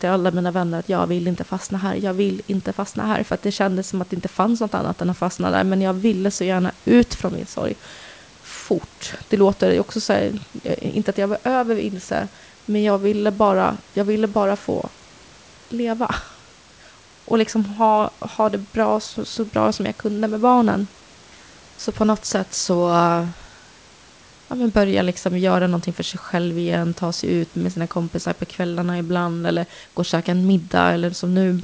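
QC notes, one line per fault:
No faults heard in this speech clip.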